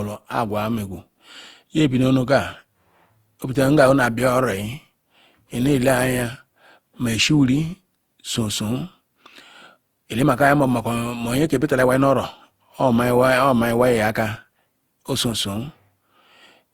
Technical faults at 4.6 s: generation loss

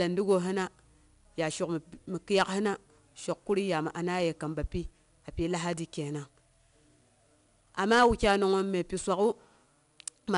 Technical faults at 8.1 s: 4-bit ADPCM compression; hard clipping

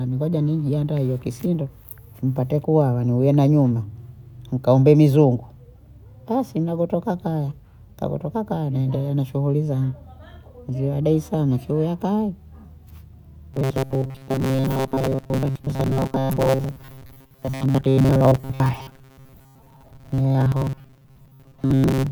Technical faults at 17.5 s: robotic sound from repeated short buffers

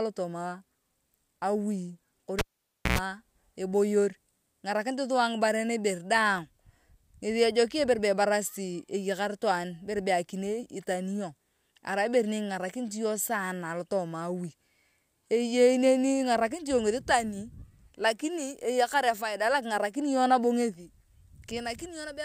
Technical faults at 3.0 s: cable pulled and plugged in

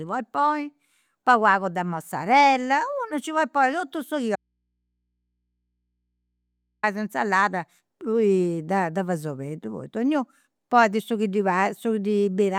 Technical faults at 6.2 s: audio dropout to a faint residue

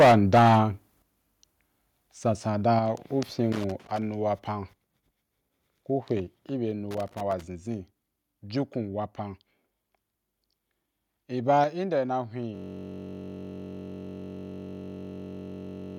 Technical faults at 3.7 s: loose connector crackle

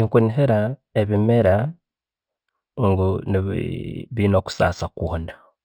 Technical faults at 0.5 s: imaging from linear upsampling

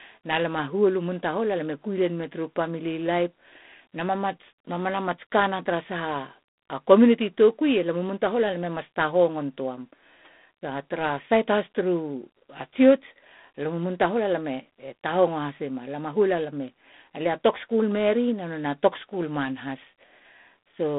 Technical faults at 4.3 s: G.726 ADPCM

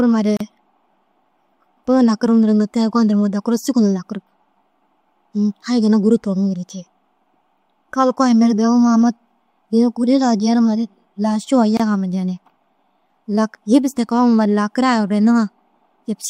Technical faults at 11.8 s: gap at a join of encoded pieces

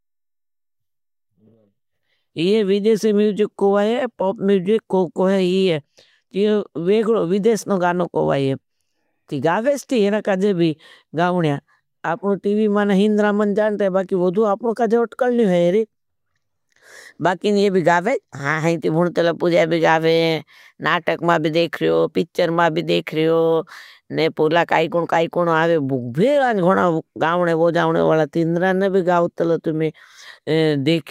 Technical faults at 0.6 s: none

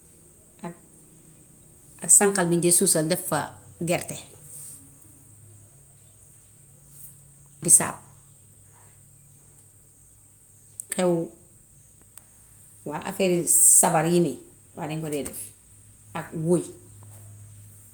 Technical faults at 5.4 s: none

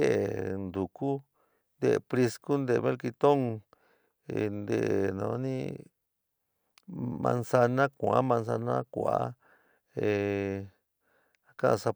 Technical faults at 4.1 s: none

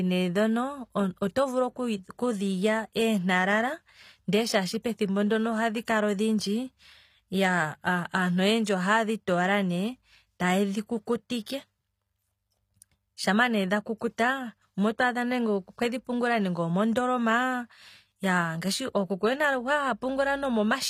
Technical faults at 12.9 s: HE-AAC compression

